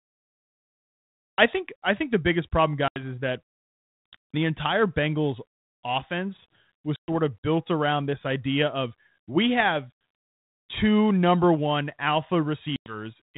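Speech over what sounds like a G.726 ADPCM telephone link, fitting 32 kbit/s, with nothing above 4 kHz. The cut-off start shows as flat digital silence from 0 to 1.38 s, then the waveform jumps straight into mid-sound with no attack or fade. Packet loss on an ADPCM call leaves hard-edged blank gaps at 2.88 s (80 ms), 6.96 s (120 ms) and 12.76 s (100 ms), each spanning a few packets. After each gap the decoder's adaptive predictor and step size are out of step with the sender's, so the sound resumes with brief, slight distortion. On a spectrogram this appears as vertical empty columns followed by broadband smear that settles within tens of milliseconds.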